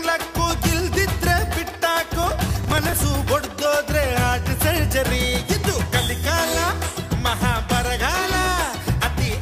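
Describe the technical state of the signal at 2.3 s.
At 2.3 s the signal has processor overload crackle, from 2.23 to 2.93 s: short buffers, around 5 ms, miss their deadlines and replay stale audio, producing gritty, hard-edged crackle.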